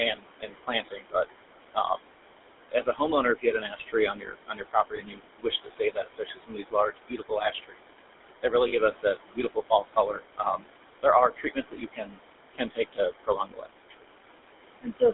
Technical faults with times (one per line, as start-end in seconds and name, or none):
0.00-15.13 noise suppressor artifacts
0.00-15.13 GSM full-rate codec
1.74-2.12 speech cut by the noise suppressor
2.71-3.00 speech cut by the noise suppressor
3.35-7.87 speech cut by the noise suppressor
4.96-4.99 lost GSM frames
8.43-10.71 speech cut by the noise suppressor
8.68-8.73 lost GSM frames
11.03-14.03 speech cut by the noise suppressor
14.82-15.02 speech cut by the noise suppressor